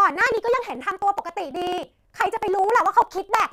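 From 0.10 to 3.45 s, periodic USB or driver dropouts skip about 10 ms of speech every 54 ms. The result is rapid, regular ticking.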